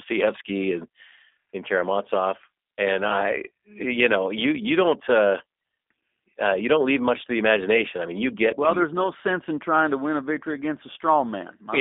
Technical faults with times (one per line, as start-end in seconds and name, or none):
0.00-11.81 G.729 codec